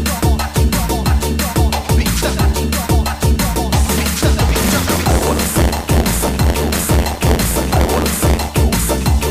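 From 4.48 to 8.49 s there is buffer tearing: the writer and the playback hardware have drifted out of step, so they cross inside each buffer period, which fits a 512-sample buffer. A small slice of every period, about 7 percent, carries audio from one lap earlier, roughly 40 ms stale, bounded by hard joins. The result is a rough, robotic buzz at about 86.1 Hz riding on the sound wherever there is signal.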